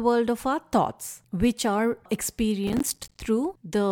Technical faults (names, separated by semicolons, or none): processor overload crackle